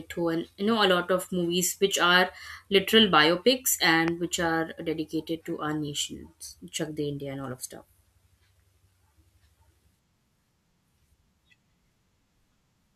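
A single sharp pop lands on the speech at 4.08 s and is over by 4.10 s, a brief crack that stands well above the level of the talking, roughly 15 dB louder, while the speech runs on beneath it without a break. This loud pop is likely an electrical transient, such as a connector being disturbed, a switch operating or a static discharge, that added a sudden voltage step to the signal, which the circuitry downstream turned into one short, hard click.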